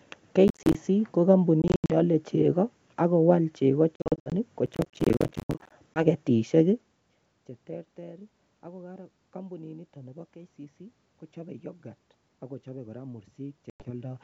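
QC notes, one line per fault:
0.48–0.75 s and 4.66–5.72 s, processor overload crackle: gritty tearing from dozens of missed audio deadlines, each leaving a short hard-edged silent gap. The spacing fits buffers of around 10 ms, and the crackle stops once the load clears.
1.62–1.91 s, 3.96–4.33 s (after "chego ak kowal chego"), 5.94–6.05 s and 13.70–13.91 s (after "kochope yoghurt akochope koraa"), packet loss on an ADPCM call: silent holes of 180, 220, 20 and 100 ms, the first two scattered with runs up to 80 ms. The decoder's predictor and step size desync, so speech resumes slightly distorted before settling.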